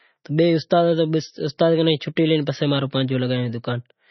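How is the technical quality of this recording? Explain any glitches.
Technical quality is poor, with heavy coding damage across the whole speech clip. Throughout, the top end stops dead at about 5.9 kHz, and the sound has a watery, swirling texture, with metallic chirps on s sounds and smeared consonant onsets. The likely cause is MP3 compression at a low bitrate, which fits roughly 24 kbps. Short of bits, the encoder cuts the treble at a fixed frequency and zeroes weak frequency lines, which flicker on and off between frames.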